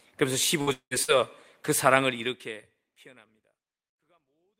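At 0.61 to 0.70 s, a burst of packet loss stretches the last sound for about 55 ms, turning it down as it goes. The waveform shrinks steadily until the speech resumes with 60 ms skipped.

From 0.73 to 0.94 s, the sound again freezes and fades for about 180 ms. Then roughly 80 ms of near-silence appears as an empty spectrogram band and a flat waveform line. The audio returns 180 ms further on, likely after a long network dropout.

At 1.03 to 1.11 s, a second burst of packet loss repeats the pattern, with about 52 ms of the last sound held and fading before the speech picks up again with 60 ms skipped.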